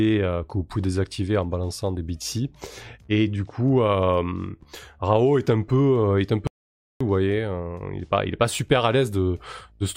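At 6.47 s the speech cuts off mid-flow and the output stays silent until 7.01 s, a gap of about 0.53 s, before carrying on. This is a playback stall, likely the player starving for data or its output thread being blocked until it recovered.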